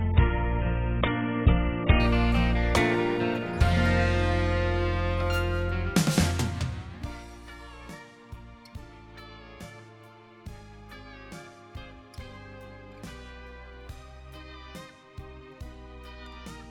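From 0.0 to 2.0 s the audio comes from an adaptive stream starting at a low bitrate. The player opens on a cheap version to start quickly, so nothing above 3.8 kHz survives and the sound is dull and smeared with codec artefacts, which fits AAC-LC at around 16 kbit/s. At 2.0 s it switches to a richer stream, near 96 kbit/s, with no gap. On a spectrogram the energy sits flat under 3.8 kHz, then the upper band suddenly fills in.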